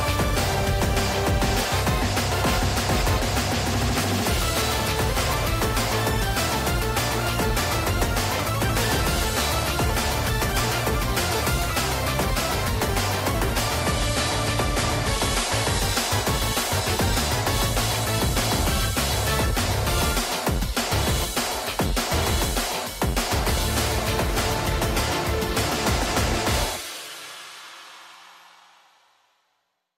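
From 13.80 s to 15.80 s the audio switches to an adaptive stream at a lower bitrate for two seconds. The player fell back to a cheaper encoding of the same material, which fits a step from 96 to 48 kbit/s AAC. The change is abrupt and gapless: the top end vanishes above 12.1 kHz, leaving a duller sound with more audible codec artefacts, before full bandwidth snaps back at 15.80 s.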